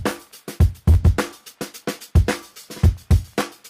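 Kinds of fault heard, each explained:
Short stall from a late packet: around 0.91 to 0.97 s a packet arrives after its playout time, the jitter buffer runs dry, and the receiver stretches the last sound for about 37 ms before resuming from exactly where it stopped. Nothing is skipped, so unlike a lost packet or dropout, no content disappears. Instead one moment is held too long with a slight buzz or dip, and everything afterwards plays about 37 ms later.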